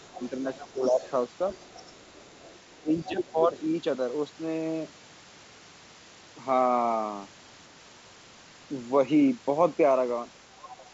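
From the start to 1.11 s a second, fainter voice sits underneath the talker, roughly 20 dB down. This is the other side's voice leaking through, likely because the talker's loudspeaker output reached the microphone and the echo canceller left a residue. Between 0.3 and 1.01 s, while that voice is present, the talker's own speech dips by around 10 dB in patches totalling under half a second. This is speech suppressed in double talk: with both sides active, the canceller likely could not tell the talker from the echo and turned everything down.

From 1.52 to 3.32 s the leak returns, quieter at roughly 30 dB below the speech but still audible as a faint second talker. Between 2.83 and 3.55 s the talker again loses level in broken pieces, about 10 dB at worst and under half a second in all. The overlap points to the suppressor likely reacting to the far-end sound. The wideband G.722 coding stays clear throughout.

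Near the end, from 10.51 to 10.87 s, the talker's voice is pushed down hard, by roughly 25 dB, so it nearly drops out in places. From 10.71 to 10.9 s the other side breaks through again at roughly 20 dB below the speech. With both sides talking at once, the canceller likely cut deep into the near-end speech while failing to remove all of the echo.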